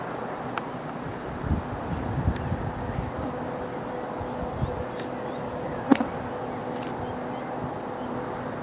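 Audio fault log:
No faults are heard in this clip. Nothing in the audio calls for a log entry.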